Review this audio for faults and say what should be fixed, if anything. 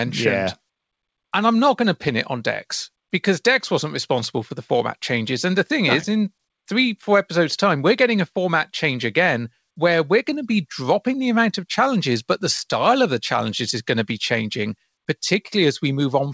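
No faults turn up in this audio, so nothing needs to be fixed.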